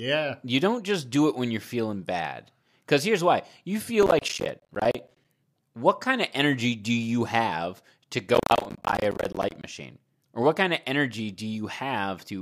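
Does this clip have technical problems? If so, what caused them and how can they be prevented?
Yes. Processor overload crackle tears through the speech from 4.03 to 5.25 s, after "here's why you feel," and again from 8.35 to 9.64 s, after "do you have to." The gaps sound like roughly 10 ms buffers missing their deadlines over and over, each one dropping to silence. Use a larger buffer or reduce the processing load to prevent it.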